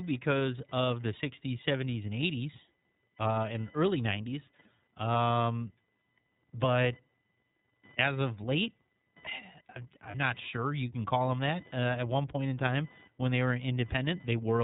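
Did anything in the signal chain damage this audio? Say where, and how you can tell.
Yes. A faint buzzing whine runs under the speech for the whole clip, pulsing at around 1 kHz and sitting about 30 dB below the voice. It tracks nothing in the speech itself. This is computer activity noise: processor or peripheral load currents disturbing the shared ground in the analogue wiring.

The speech is band-limited, with nothing above 4 kHz, and has a slightly rough, synthetic edge that is plainly audible throughout. That points to the iLBC codec at the codec stage. The quality fits its 13.33 kbps mode with 30 ms frames, where each frame's excitation is coded independently.

At 10.11 s, just before "not sure you can", a 30 ms stretch turns into a brief held, buzzy vowel-like sound, and the voice recovers immediately. This fits a single lost 30 ms iLBC frame on the network. The decoder filled the gap by repeating the last pitch cycle mixed with noise.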